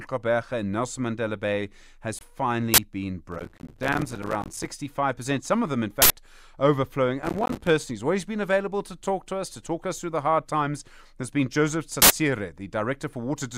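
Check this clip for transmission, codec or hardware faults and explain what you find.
The clip is speech and has three kinds of fault: one brief dropout, three bursts of garbage noise, and two stretches of crackle.

Bluetooth dropout, 2.19 to 2.21 s. The most likely cause is that a single audio packet failed to reach the headphones in time and was discarded, so playback had nothing to play for about 20 ms. The result is a short hole of silence. The speech then picks up further along, as though it had kept running during the gap, so the missing slice is simply skipped over rather than delayed.

Uninitialised buffer, at 2.74 to 2.78 s (40 ms), 6.02 to 6.10 s (80 ms) and 12.02 to 12.10 s (80 ms). In each case a block of audio was sent to the output before any real samples had been written into it. Whatever stale data sat in that memory was played as if it were sound. Each event is a sudden, loud blast of digital noise that cuts across the speech. 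The shorter first burst is half the length of the later two.

Processor overload crackle, 3.32 to 4.66 s and 7.22 to 7.67 s. The processor fell behind on its small audio buffers, which sound roughly 5 ms long, and kept missing their deadlines. Each missed buffer was output as silence, leaving a tiny hard-edged gap. Around a hundred such gaps in the first stretch and around forty in the second pile up into a gritty, tearing crackle over the speech, which stops once the load eases.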